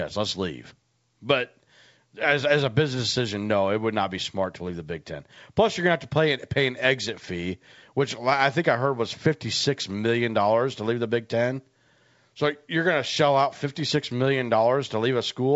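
No faults can be heard in this speech, which carries the wideband telephone-coded sound of G.722 reaching up to about 7 kHz, consistent with its full 64 kbit/s mode.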